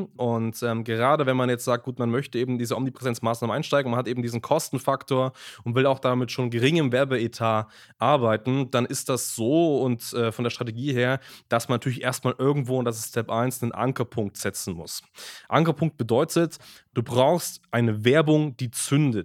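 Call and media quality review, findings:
No findings: the call and media quality review turns up no faults in this speech clip.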